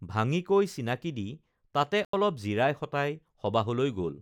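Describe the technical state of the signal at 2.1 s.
At 2.1 s the speech drops into a block of digital silence lasting from 2.05 to 2.13 s, about 85 ms, a length that fits a 4096-sample buffer the program likely failed to fill in time. The signal cuts to silence and back with no fade, leaving a short, dead hole. Unlike a dropout that fades or is concealed, this gap holds plain silence.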